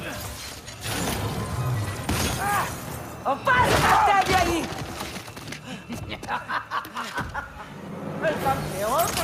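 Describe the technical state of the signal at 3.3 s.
Nothing at 3.3 s points to a fault; the signal is intact at that moment.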